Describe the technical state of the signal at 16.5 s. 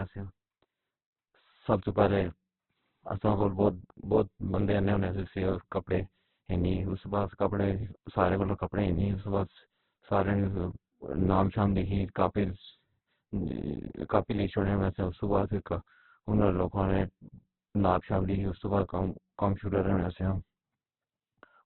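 At 16.5 s, as throughout, the speech sounds rough, grainy and muffled, likely from heavy Opus compression filling bit-starved bands with noise. A spectrogram shows nothing above 4.2 kHz.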